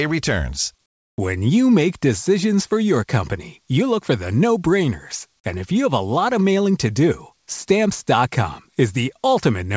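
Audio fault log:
0.86–1.18 s, comfort noise in place of the background: for about 320 ms the real room tone, already about 51 dB below the loudest passages, gives way to a smooth, featureless hiss roughly 6 dB quieter. This is likely discontinuous transmission. The sender stopped coding during the pause, and the receiver synthesised generic noise shaped to the background's rough spectrum, which loses the original texture. The call path's band limit shows as nothing above 8 kHz.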